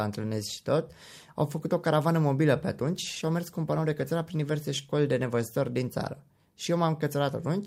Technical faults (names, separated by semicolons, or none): call bitrate drop